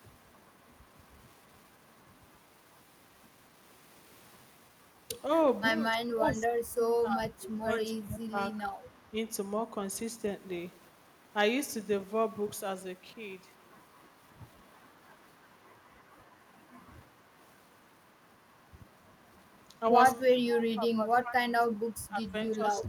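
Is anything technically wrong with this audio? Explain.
Yes, the speech has two kinds of fault.

Echo leak: A delayed copy of the speech trails it by about 303 ms at 0.53 to 0.74 s, 8.41 to 9.5 s, 15.3 to 16.65 s, 17.87 to 18.22 s and 22.77 to 22.85 s. It is barely audible in most places, stronger around 8.4 to 9.5 s, and only about 10 dB below the speech in the last brief burst. The likely cause is a far end playing the call on a loudspeaker, where the echo canceller failed to remove everything its microphone picked up and sent the remainder back.

Speech suppressed in double talk: From 5.94 to 8.37 s, and again from 19.68 s to the end, the speech sinks and breaks up, dropping by as much as about 25 dB in places. In the first stretch, roughly two seconds in total are affected. This likely happened because both sides spoke at once. The echo canceller could not tell the local talker from the loudspeaker echo, so it pulled both down together.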